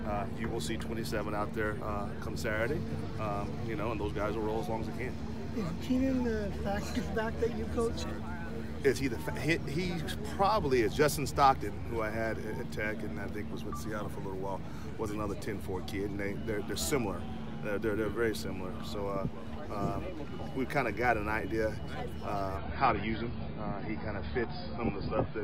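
At 22.58 s the audio abruptly drops to a lower-bitrate version of the adaptive stream and stays there to the end, with no gap. Everything above about 5 kHz vanishes and artefacts thicken, which sounds like a fall from roughly 96 to 16 kbit/s.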